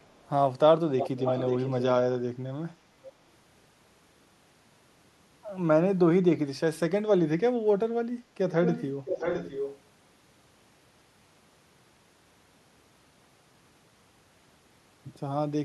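A delayed copy of the speech trails it. At 0.02–0.28 s it is very faint and 444 ms behind. At 0.99–1.83 s it is nearly as loud and 535 ms behind. At 8.52–8.85 s and 9.05–9.79 s it is again nearly as loud, lagging 664 ms. This is likely an echo leak, where an echo canceller on a loudspeaker end let the returned sound through.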